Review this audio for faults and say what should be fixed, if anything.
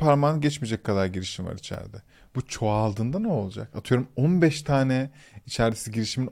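Overlap between stream segments causes tiny skips at 1.74, 3.73 and 5.72 s, repeating about every 2 s. Each time the segments' timestamps overlap, the player discards 6 to 15 ms of real speech. The waveform jumps abruptly there, and a spectrogram shows a thin vertical broadband line. To prevent it, set segment timestamps so each segment begins exactly where the previous one ends.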